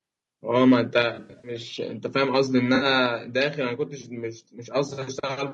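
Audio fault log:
Throughout, low-delay AAC compression: the speech is rough and grainy, with noise filling the gaps between pitch harmonics and a thin, artificial-sounding top band. This is likely AAC-ELD, the low-delay codec used in video calls. Its very short frames cannot separate closely spaced harmonics well, and the plainly audible damage fits a low bitrate of around 32 kbps, which leaves too few bits to code the voice cleanly.
0.73 to 0.98 s, microphone overload: the loudest stretch of speech gains a harsh, crackly edge. The input volume was likely set so high that peaks pushed about 1 dB past the converter's limit, flattening their tops. Only a tiny fraction of samples were cut, so the distortion is brief and concentrated on the strongest peaks rather than spread across the passage.
1.02 s and 3.06 s, microphone volume stepped down: at each point the voice and the background drop together in a single abrupt step, by about 4 dB and then by about 3 dB. 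The first step comes right after the overloaded peak, which suggests the call software likely detected the clipping and cut the device's input gain in one move. It did so again later, leaving the speech noticeably quieter after each change.
1.15 to 1.51 s, 2.75 to 2.85 s and 4.93 to 4.99 s, AAC frame loss with concealment: the sound turns smeared, noisy and phasey while the decoder rebuilds missing frames from the last good spectrum. The first patch is the worst, with about 200 ms missing across 280 ms and the longest gap near a tenth of a second. The later patches lose 60 ms and 40 ms and pass as short blurs.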